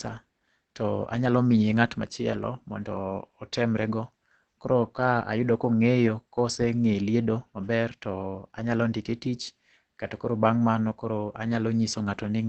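Low-bitrate encoding, likely Opus compression in its speech mode near 16 kbps, runs throughout, cutting everything above 8.3 kHz and leaving the speech muffled and hoarse.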